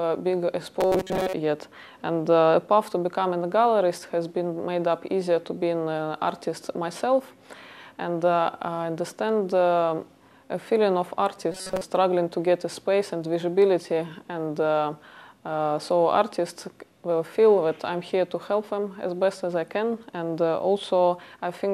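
A rigid, metallic buzz at 188 Hz replaces the sound from 0.81 to 1.33 s and again from 11.52 to 11.82 s. This robotic sound likely comes from repeated short buffers: a roughly 5.3 ms slice loops while most of the real audio is skipped.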